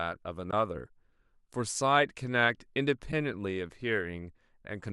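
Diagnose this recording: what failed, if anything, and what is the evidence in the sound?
The speech drops out twice with AAC frame loss with muting, a network-to-decoder failure: once from 0.51 to 0.53 s, and again briefly at 3.12 s. Each hole fades out and back in rather than snapping. That fits the decoder zeroing lost frames while overlapping windows taper the edges, with lengths matching two and then one 10 ms frame, likely from a low-delay AAC stream. A buffer underrun or hard dropout would leave abrupt, clicky edges instead.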